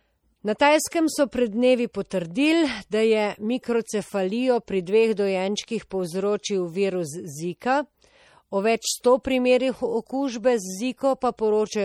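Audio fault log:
Throughout: MP3 compression. The speech sounds watery and swirly. Faint detail flickers in and out from moment to moment. S sounds carry metallic chirps, and attacks are smeared. This is likely low-bitrate MP3 encoding, and the damage fits a rate near 48 kbps. The encoder runs short of bits, so it zeroes weak frequency lines, which switch on and off between frames.
0.58 s, 2.10 s and 9.23 s: pre-echo. Each sharp onset is preceded by a brief hiss. The hiss lasts about 15, 14 and 18 ms respectively. The attacks sound soft rather than crisp. The codec spreads its quantisation noise across a whole block. Here each attack lands late in its block. Noise sized for the loud onset therefore leaks into the quiet moment just before it.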